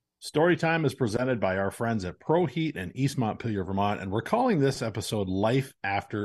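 No technical faults are audible.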